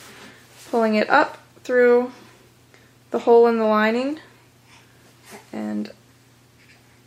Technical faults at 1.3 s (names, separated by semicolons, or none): none